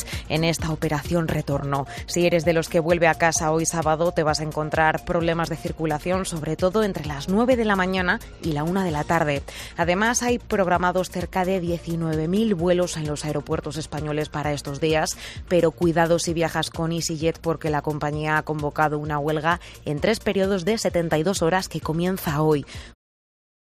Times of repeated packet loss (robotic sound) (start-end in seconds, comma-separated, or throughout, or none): none